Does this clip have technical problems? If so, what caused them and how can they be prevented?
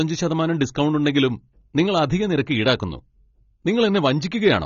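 Yes. AAC compression, throughout: nothing sounds above 6.9 kHz and the damage is plainly audible, likely a low-bitrate AAC-LC encode, fitting roughly 24 kbps. Encode at a higher bitrate.

Hard clipping, 4.46 to 4.55 s: the level overshoots by about 2 dB, so peaks are cut flat and add upper harmonics. Leave more headroom before conversion.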